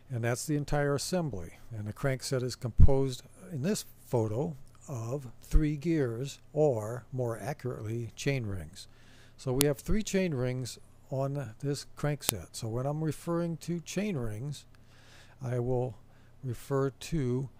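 At 9.61 s and again at 12.29 s there's a sharp, loud snap, a file header played as audio. The pieces were joined with their WAV headers left in, so those few dozen bytes of header data get read as samples and crack through regardless of the sound.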